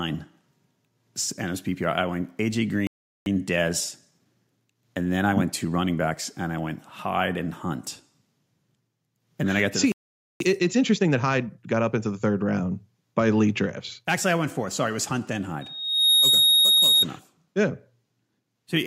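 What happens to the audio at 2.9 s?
At 2.87 s the speech cuts off mid-flow and goes silent until 3.26 s, a gap of about 0.39 s. This is a playback stall. The player likely ran short of data or was briefly blocked, so output halted before resuming.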